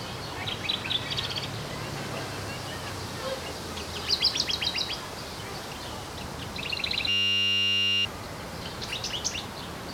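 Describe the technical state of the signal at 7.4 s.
A system hang loop runs from 7.09 to 8.05 s. The playback system froze while the hardware kept replaying one 10 ms stretch of its buffer, so the sound becomes a steady 100 Hz buzz and roughly a second of audio is lost.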